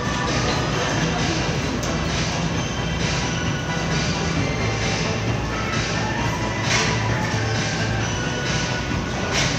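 No technical faults are audible anywhere in these everyday sounds.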